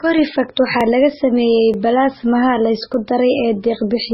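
The whole speech clip is dull and band-limited, with the swirly, smeared texture of a very low-bitrate MP3, something around the high teens of kbit/s. It's most likely low-bitrate audio saved at a high bitrate: the file is big, but re-encoding can't bring back what the first pass threw away, so the cut-off and artefacts from that first encode are all still sitting there.

At 0.81 s there's a tiny jump forward, and again at 1.74 s just before "balaasmaha la", then at 2.94 s right after "balaasmaha la". Each sounds like a dropped buffer (overrun): a few milliseconds of samples were likely overwritten before the software read them, so the audio on either side is butted together with no gap. That's the skip you hear.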